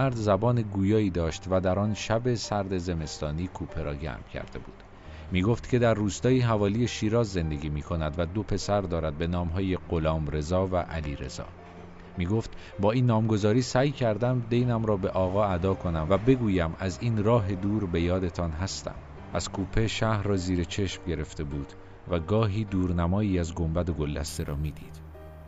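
Imaging from sample-and-hold upsampling appears from 24.28 s to the end at 25.48 s. A bright, metallic fizz rides on top of the sound and rises and falls with it. The rate was raised by simply holding each sample, with no smoothing filter, so mirrored copies of the spectrum fill the band. The lowest copy spans 8 to 16 kHz, about 18 dB below the sound, and runs opposite to its pitch movement. That spacing fits an original 16 kHz rate.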